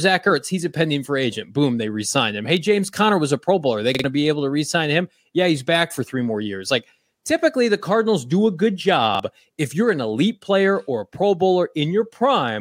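At 3.95 s there's a repeated buffer: fresh audio didn't arrive in time, so the same 46 ms chunk plays twice more, a stutter with hard joins, losing roughly a tenth of a second. At 9.15 s it repeats once, which fits a 2048-sample buffer.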